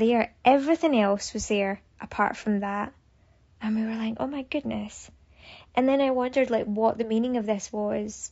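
Speech, and the whole 8-second run carries plainly audible low-delay AAC compression: the voice sounds rough and grainy, with noise smeared between the harmonics and a thin, synthetic top end. That's likely AAC-ELD's short frames starved of bits, which fits roughly 32 kbps.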